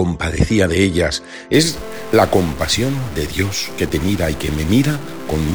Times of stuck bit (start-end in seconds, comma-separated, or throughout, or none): 1.54-5.54